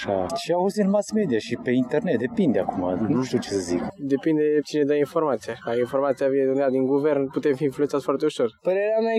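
Nothing here stands out as a technical problem; the sound runs its whole course without any fault worth flagging.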